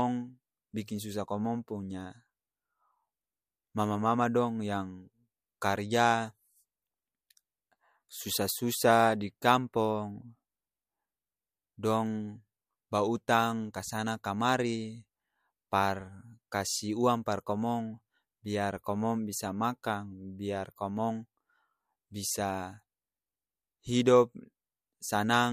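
Nothing in the recording stands out as a technical fault.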